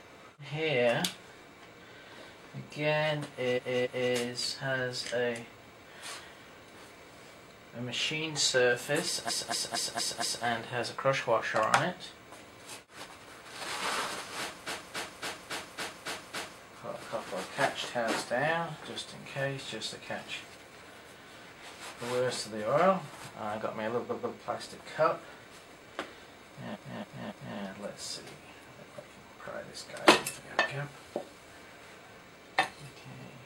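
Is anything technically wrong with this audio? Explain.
Yes, there are repeated frames: short runs of compressed audio were delivered more than once, so the decoder replays the same slice and the sound stutters, looping back each time. This happens at 3.53–4.09 s (a 0.28 s block played two extra times), 9.25–10.41 s (0.23 s, five times), 14.63–16.58 s (0.28 s, seven times), 24.06–24.34 s (0.14 s, twice) and 26.71–27.54 s (0.28 s, three times). Each repeat adds its length to the audio, about 4.8 s in total.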